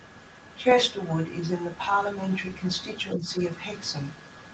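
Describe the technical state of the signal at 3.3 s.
The speech level sags briefly, by about 5 dB at its deepest, from 3.15 to 3.29 s, ending right at this moment. This is likely speech suppressed in double talk: the echo canceller, unable to separate the near talker from loudspeaker echo, turned both down.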